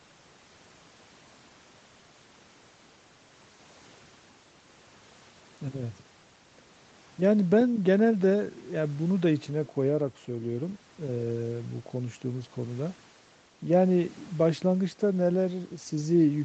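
No technical faults are audible.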